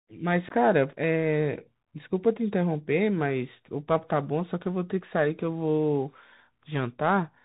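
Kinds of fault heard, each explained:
Bluetooth CVSD headset codec: narrowband, scratchy s sounds and granular hiss under the speech, nothing above 4 kHz, from one-bit 64 kbps slope coding with adaptive step.
Unconcealed Bluetooth headset packet loss: an abrupt 15 ms hole near 0.49 s, as a couple of lost voice packets were replaced by silence or an idle pattern.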